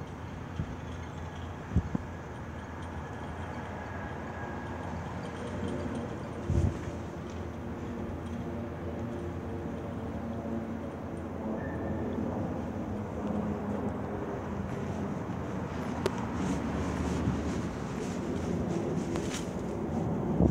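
At 1.95 to 1.98 s there's a loud pop, a single sharp hit sitting roughly 20 dB above the sound, which keeps going underneath. Another, a touch harder at around 25 dB, lands at 16.06 to 16.09 s, and a third, again near 20 dB, at 19.16 to 19.19 s. Each lasts only a few hundredths of a second. They're likely voltage spikes, from something like a plug, switch or static discharge, being added to the signal.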